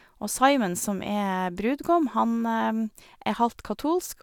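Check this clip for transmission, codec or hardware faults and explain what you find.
No transmission, codec or hardware faults turn up in this clip.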